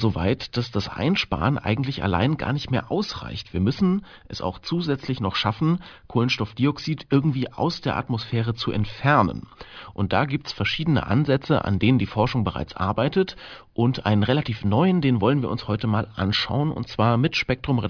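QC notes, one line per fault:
No faults found on this speech clip.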